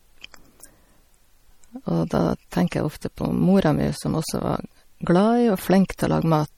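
From start to finish the speech has a watery, swirling quality, with the s sounds turning metallic and consonant attacks smeared rather than crisp. The damage is plainly audible throughout, and nothing sounds above 19.1 kHz. This is likely MP3 compression at a bitrate that fits roughly 48 kbps: starved of bits, the encoder drops weaker frequency lines, which flicker in and out between frames, and it trims the top of the spectrum outright.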